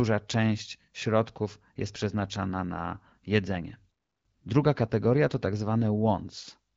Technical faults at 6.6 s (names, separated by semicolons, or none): none